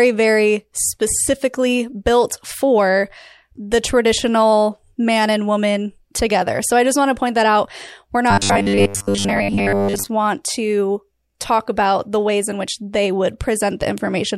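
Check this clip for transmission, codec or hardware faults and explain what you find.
One fault stands out. From 8.31 to 10.09 s, just before "want to talk about", the speech becomes a rigid metallic buzz at 100 Hz that loosely follows the words. This is robotic sound from repeated short buffers. The likely cause is audio arriving too seldom, so a fragment that fits a 10 ms buffer is looped while most of the real signal is skipped.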